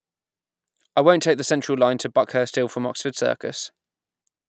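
No technical faults are audible.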